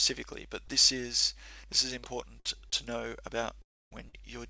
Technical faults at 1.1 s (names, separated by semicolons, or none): none